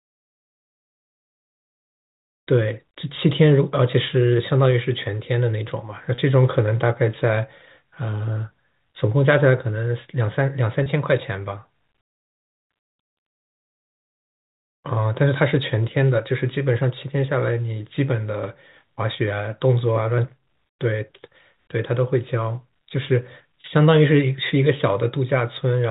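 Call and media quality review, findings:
Packet loss with pitch repetition at 6.15–6.18 s, 10.83–10.86 s and 23.61–23.64 s. Symptom: brief held, slightly buzzy tone. Each gap is 30 ms, which fits a single lost packet. Probable component: receiver jitter buffer and concealment. Mechanism: the decoder loops the last pitch period to fill the hole. The gap is too short for the fade to reach silence. G.711 telephone coding caps the band at 4 kHz.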